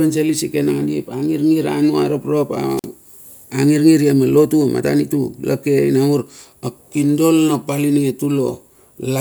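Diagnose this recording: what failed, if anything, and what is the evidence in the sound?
A wireless microphone squelch dropout hits the analogue radio link at 2.76 to 2.85 s. Static rises, then the receiver mutes the speech for 47 ms.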